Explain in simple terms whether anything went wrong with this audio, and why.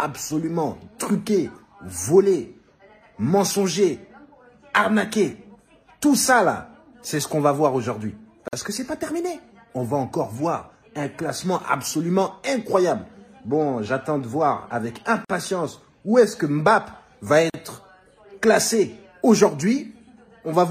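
The audio was encoded in separate pieces and joined without trimming the padding each piece carries. That leaves a gap at a join of encoded pieces, a brief dropout of about 45 to 50 ms at 8.48, 15.25 and 17.50 seconds, before the sound resumes.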